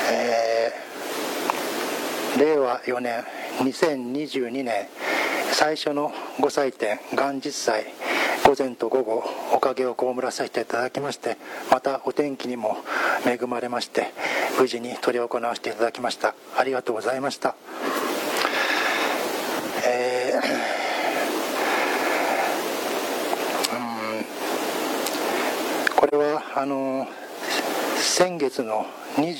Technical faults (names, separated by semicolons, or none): AAC frame loss with muting